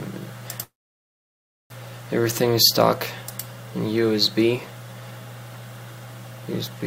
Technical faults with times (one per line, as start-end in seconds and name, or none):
0.63-1.73 call audio freeze